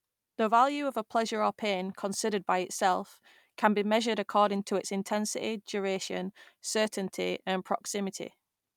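Nothing goes wrong anywhere in this bit of speech, so there's no technical fault to point to at any moment.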